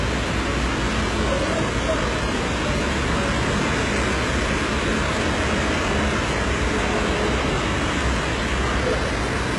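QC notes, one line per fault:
Throughout, hard clipping: peaks driven about 7 dB past full scale are sliced flat on a few percent of samples, adding harsh upper harmonics as crackle on loud moments, unlike smooth soft saturation.
Throughout, HE-AAC compression: treble stops at 11.4 kHz and what remains sounds gritty and metallic, likely band replication at a bitrate around 12 kbps rebuilding highs from copied lower bands.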